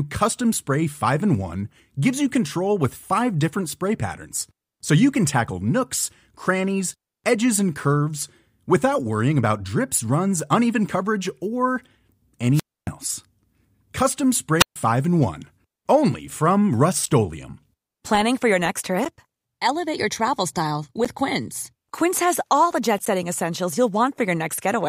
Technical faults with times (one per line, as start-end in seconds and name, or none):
12.53-12.88 wireless microphone squelch dropout
14.58-14.76 wireless microphone squelch dropout
17.06-23.06 periodic USB or driver dropouts